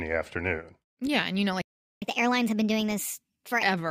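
Right after "you know", at 1.62 s, the speech just drops out and stays silent until 2.02 s, a gap of about 0.4 s. That's a playback stall: the audio stops mid-flow and then resumes where it left off rather than skipping ahead. The likely cause is the player running dry on data, or its output thread getting blocked long enough that nothing reached the device until it recovered.

From 2.02 s to 3.63 s you get the catch-up at higher speed. Having fallen behind during the stall, the player is resampling its queued backlog so it runs at 1.25 times normal speed. Because it's plain resampling, not time-stretching, the pitch rises with it, roughly four semitones, so the speech sounds hurried and noticeably chipmunky for about a second and a half before it drops back to normal rate and pitch.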